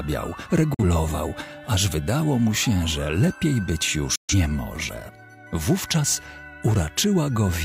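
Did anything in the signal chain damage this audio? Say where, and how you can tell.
Yes. Digital broadcast dropouts hit the reception stage twice. The sound fades within 8 ms to silence from 0.74 to 0.83 s, and again from 4.15 to 4.34 s. The receiver muted on bad frames. The gaps fit one and three lost frames.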